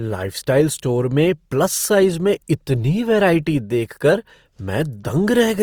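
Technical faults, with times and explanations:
Throughout, Opus compression: plainly grainy, rough speech fits a likely 24 kbps music-mode encode; the spectrogram shows speckled, noise-filled bands reaching 20.3 kHz.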